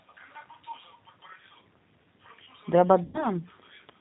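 From start to end, the speech carries the sound of the G.729 codec, consistent with its 8 kbit/s mode. Nothing above 4 kHz comes through. Each frame is rebuilt from a vocal tract filter, a pitch estimate and a few pulses. The result is plainly rough and synthetic.

At 3.04 s, VoIP packet loss concealed by the speech codec begins. About 100 ms of audio went missing. The decoder stretched its last pitch and filter into a fading buzzy tone or coloured noise. The speech stays weak and distorted until about 3.28 s.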